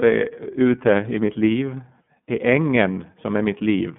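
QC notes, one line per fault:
throughout iLBC codec: nothing above 3.7 kHz, with a plainly rough, synthetic 30 ms frame grain that a simple band-limit lacks, fitting 13.33 kbps mode.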